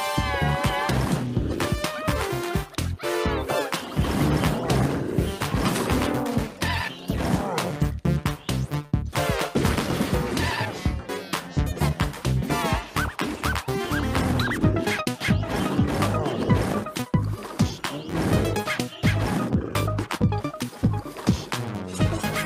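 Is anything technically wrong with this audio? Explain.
Yes. The clip has two related timing faults.

Clock drift between sender and receiver runs through the whole clip. The sender's audio clock runs roughly 4 percent faster than the receiver's. Audio arrives faster than it is played out, so the jitter buffer keeps filling. The receiver must keep discarding small pieces to stay in step. The result is small timing hiccups at uneven intervals and a slightly unsteady pace.

Repeated timing corrections occur in three stretches. From 7.82 to 8.93 s, playback runs at 107 percent speed. From 11.88 to 15.19 s, it runs at 103 percent. From 17.02 to 21.59 s, it runs at 106 percent. In each stretch, the receiver trims short pieces to drain its overfilled buffer. All the edits push the same way, toward faster playback. Each is small, and they come across, if at all, as slight hiccups or an unsteady tempo.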